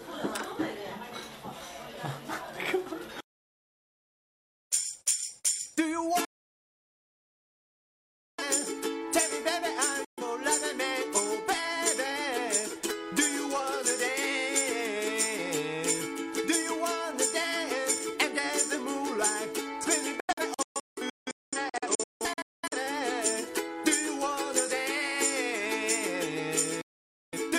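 Digital broadcast dropouts mute the sound at 6.25–8.42 s, 10.05–10.23 s and 26.81–27.38 s, and in scattered short holes from 20.2 to 22.77 s, the longest 0.21 s. Each snaps to silence within 3 ms as the receiver loses valid frames. The audio in those gaps is lost.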